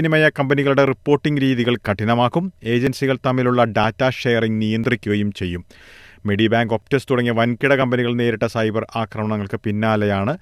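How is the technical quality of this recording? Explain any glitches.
The speech carries a recurring timing glitch: a brief skip at 0.87, 2.87, 3.84, 4.84, 6.82 and 7.82 s. This is overlap between stream segments. The audio arrives in 1.0 s segments whose timestamps overlap, and the player trims the overlap even though that sound was never duplicated, so 5 to 17 ms simply vanishes. Each join is heard as a small click or hiccup, spaced at whole-second intervals. On a waveform, the trace jumps abruptly at each point. A spectrogram shows thin vertical broadband lines there.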